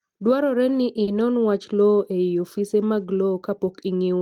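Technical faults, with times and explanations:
1.03 to 1.10 s, short stall from a late packet: a packet arrived late and the jitter buffer ran dry, so the receiver held the last sound for about 40 ms before resuming where it left off, with nothing lost but everything after it shifted 40 ms later. On a spectrogram the harmonics run flat and unchanging through that stretch, and the waveform repeats a near-identical cycle.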